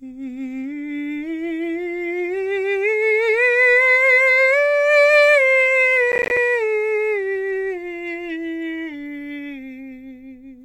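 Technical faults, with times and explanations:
6.12–6.37 s, processor overload crackle: around ten buffers of roughly 10 ms each miss their deadline and drop to silence, producing a brief gritty crackle over the music.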